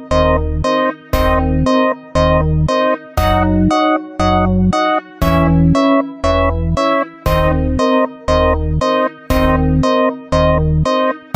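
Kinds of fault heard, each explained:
Sample clock jitter: the converter's timing wobbles by under a microsecond. From 6.40 to 9.07 s, faint hiss sits roughly 50 dB below the sound.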